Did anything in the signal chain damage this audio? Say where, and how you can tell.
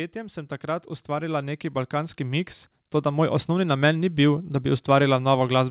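Yes. Automatic gain rising from 0.12 s to 3.54 s, at the call-processing stage: speech and background noise swell together by about 9 dB over those seconds. An automatic gain control judged the input too quiet and raised its gain gradually.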